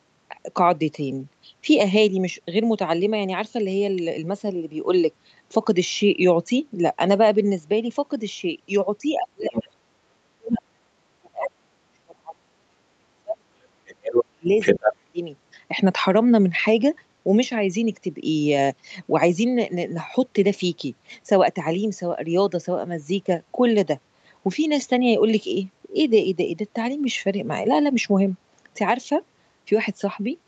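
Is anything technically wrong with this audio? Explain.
Yes. Between 9.15 and 15.2 s the speech is repeatedly pushed down by speech suppressed in double talk, and the other side's voice leaks through in short bursts.

Speech suppressed in double talk occurs at 9.15–10.0 s, 10.33–10.81 s, 11.03–14.47 s and 14.8–15.2 s. The drops reach about 35 to 40 dB and add up to several seconds, the longest stretch lasting about three seconds. The likely cause is an echo canceller that, with both parties talking, could not tell the near talker from loudspeaker echo and attenuated everything. On a waveform the envelope collapses in gaps, and on a spectrogram the harmonics fade or break into fragments.

The other side's voice leaking through appears at 9.45–9.68 s, quietly at about 10 dB below the speech, then at 14.05–14.25 s and 14.6–14.93 s at roughly the same level as the speech. This is likely residual loudspeaker echo that the canceller failed to remove from the microphone. 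It shows as a second, unrelated harmonic pattern overlapping or filling the suppressed gaps.

The call path itself has nothing above 8 kHz, which fits a wideband Opus setting, so the spectrogram is empty above that line.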